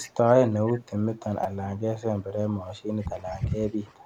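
Speech with three kinds of fault. An echo leak, likely from a far-end echo canceller that failed to remove its loudspeaker's pickup, sends a delayed copy back. A faint repeat arrives about 360 ms late, roughly 20 to 25 dB down, from 0.02 to 0.33 s and again from 0.53 to 0.87 s. At 1.44 s a repeated buffer occurs: fresh audio was late, so the device replayed its last block, which fits a 256-sample buffer of about 5 ms. That sliver sounds four times with hard joins, heard as a brief buzzy stutter, and about 15 ms of real audio is lost. Speech suppressed in double talk likely follows from the echo canceller mistaking overlapping far-end speech for echo and turning the near talker down. The voice dips by about 10 dB from 1.99 to 2.06 s, about 15 dB from 2.46 to 2.55 s, and about 10 dB through a longer stretch from 2.75 to 3.72 s.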